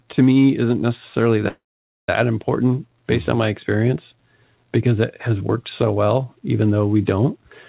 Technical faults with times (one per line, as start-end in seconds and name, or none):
1.48-2.09 call audio freeze